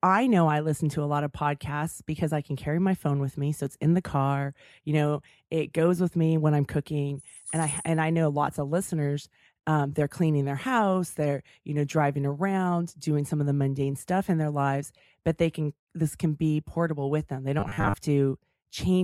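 It's a speech clip, and from 17.60 to 17.96 s it goes robotic, a flat 100 Hz buzz, likely repeated short buffers of about 10 ms, with roughly half the audio looped.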